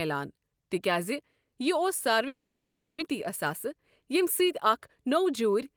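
At 2.27 s the speech breaks off until 3.02 s, and the gap sounds like a long network dropout. The last sound is stretched into a fading buzz, then goes quiet, with about 0.6 s of speech never heard. What separates this from a brief packet loss or an edit cut is the length and that fading synthetic tail before the silence. A stall in delivery is the likely cause, and the wait appears to have added roughly a tenth of a second of delay.

From 3.13 s to 5.26 s the jitter buffer speed-up works that extra delay off. The receiver drops short slices of one or a few pitch periods over and over, so the speech runs about 5% fast and sounds slightly hurried. Around a tenth of a second is trimmed in total. Unlike resampling or a playback-rate error, the pitch stays unchanged. Only the timing tightens.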